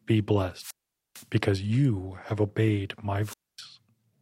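A speech clip with two wireless microphone squelch dropouts. The first runs from 0.54 to 1.27 s. The second runs from 3.22 to 3.62 s. Each time, hiss or static swells briefly, then the sound drops to near silence. That hole lasts 0.45 s in the first event and 0.25 s in the second. The analogue FM radio link fades too far. The receiver's squelch then mutes the output until the signal recovers.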